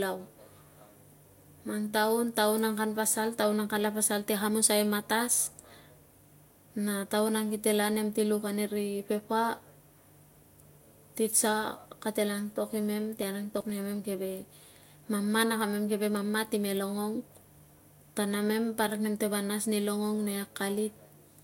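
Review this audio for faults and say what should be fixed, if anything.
The speech has a hard ceiling at 16.6 kHz across the whole clip, along with the smeared, swirly coding artefacts of a low-rate encode. This is likely low-bitrate audio saved at a high bitrate: the sound fits an earlier encode at around 64 kbit/s (a Vorbis-style result) later re-wrapped as a roughly 255 kbit/s MP3, which cannot restore what was already discarded. On a spectrogram, energy stops abruptly at 16.6 kHz with holes and smearing below it. Re-encode from the original uncompressed source rather than from the compressed copy.

From 13.17 to 13.70 s, processor overload crackle rides over the speech as a gritty tearing burst. The processor missed a run of deadlines, about ten in a row. Each missed buffer, roughly 10 ms long, was skipped outright, leaving a hard-edged jump in the signal. On the waveform this shows as a cluster of abrupt discontinuities, and on a spectrogram as thin vertical broadband streaks across that half-second. 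Prevent it by enlarging the audio buffer or reducing competing CPU load during recording and processing.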